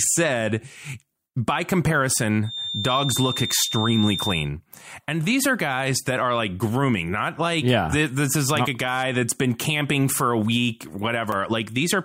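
From 2.41 to 4.50 s, a feedback whistle sits behind the speech. It is a thin, steady tone at 3.6 kHz, somewhat below the speech level. It swells and fades slowly but never builds into a howl. The likely cause is a loudspeaker-to-microphone loop held just at the edge of feedback.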